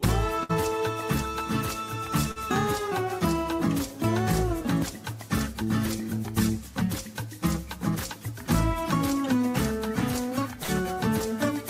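At 0.43 to 0.52 s there's a burst of packet loss. The receiver stretches the last sound for about 57 ms and fades it, so you get a brief held buzz or hiss. Then the audio jumps ahead past roughly 40 ms that never arrived, with a 17 ms shift in timing.

Around 2.31 to 2.39 s you'll catch a short concealed packet loss. About 40 ms went missing, and the decoder papered over it with roughly 42 ms of continued sound before blending back. It comes across as a quick smear or wobble rather than a gap.

At 10.63 to 10.85 s comes the second burst of packet loss. There's about 45 ms of faded fill covering 40 ms of lost audio, and another 11 ms is cut out, so the sound skips forward slightly.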